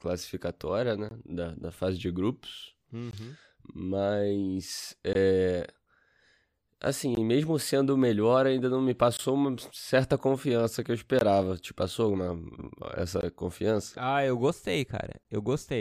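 Speech with a gap between chunks. Short silent holes with hard edges open at 1.09, 3.11, 5.13, 7.15, 9.17, 11.19, 13.21 and 15.23 s. Each lasts 20 ms. The audio arrives in 2-second chunks, and silence is inserted at every join without losing sound.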